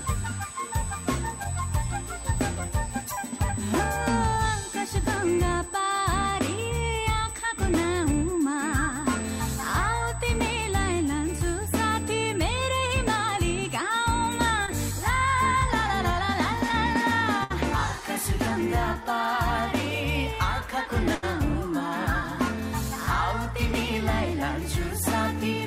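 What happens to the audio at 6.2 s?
USB whine runs through 6.2 s, part of a stretch lasting from the start of the clip to 15.69 s. The USB bus pulls current in regular bursts, and here the 125-microsecond microframe rhythm has leaked into the audio through the power or ground path. The result is a steady, fixed-pitch whine at 8 kHz, sitting thin and high above the sound at roughly 15 dB below it.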